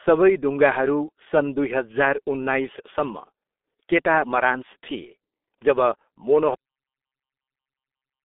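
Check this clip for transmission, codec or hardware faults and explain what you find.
Two faults are audible: heavy G.723.1 codec damage throughout, and a cut-off end at 6.55 s.

G.723.1 codec: From start to finish the speech sounds muffled, boxy and hoarse, with smeared consonants. The band sits roughly between 250 Hz and 3.6 kHz, and nothing at all comes through above 3.8 kHz. This telephony codec models the voice in 30 ms frames and updates that model slowly, so fast articulation blurs. The heavy damage fits a low-rate stream of about 6.3 kbit/s.

Cut-off end: At 6.55 s the speech stops abruptly in mid-sound and falls straight to digital silence, with no natural decay. The silence then runs to the end of the clip. The final stretch of audio was never written out or played, so the signal was truncated rather than faded, leaving a hard edge where the sound should have continued.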